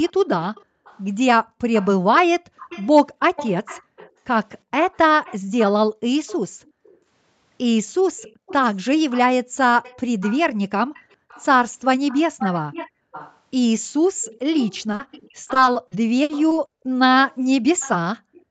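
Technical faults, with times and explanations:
0.09–6.97 s and 8.18 s to the end, echo leak: A faint delayed copy of the speech trails behind it. In the first stretch it lags by about 0.37 s and sits about 20 dB below the speech. In the second it lags by about 0.53 s and is louder, about 15 dB down. The likely cause is a loudspeaker at the far end whose echo canceller let part of the played-back sound return down the line.
0.64–1.58 s, 6.68–6.79 s and 11.17–11.29 s, background gated by the echo canceller: The room sound sinks abruptly, by as much as about 40 dB, then comes back. The first dip covers roughly 0.4 s in total. The other two last about a tenth of a second each. The canceller clamped the microphone while the loudspeaker played. It released it once playback eased.
14.91–16.53 s, repeated packet loss (robotic sound): The speech turns choppy. Ten gaps fall close together in this span. 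The longest is 60 ms. Each hole was patched by stretching the preceding sound, 280 ms in all, about 17 percent of the stretch. These repeated patches break up the flow of the speech. Another 280 ms is simply missing, which leaves audible holes.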